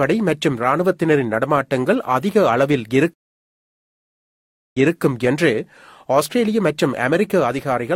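At 3.14 s a stream reconnect occurs. The connection drops, leaving about 1.59 s of silence. Playback resumes at 4.98 s, repeating roughly a quarter second of speech.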